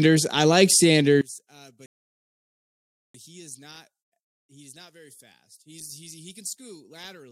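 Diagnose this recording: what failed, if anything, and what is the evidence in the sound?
From 1.21 s, just after "I like", to the end of the clip, the speech drops by about 24 dB and what remains sounds faint, the signature of one channel inverted. With one stereo channel's polarity flipped, the centred voice cancels when the channels are summed to mono, leaving only the small difference between them. The likely stage is analogue wiring, such as a balanced lead with its hot and cold conductors swapped on one side.

From 1.86 s to 3.14 s the audio goes silent and then resumes exactly where it stopped, with nothing skipped. This is a rebuffering stall. The player exhausted its downloaded audio and waited for more data, adding about 1.28 s to the clip's running time. The fault lies at the network and playback-buffer stage, where delivery fell behind the playback rate. It is not a recording defect.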